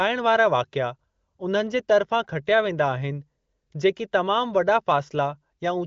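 Nothing stood out on listening to this speech, which comes through an AMR wideband (HD Voice) link with its top end stopping a little above 7 kHz.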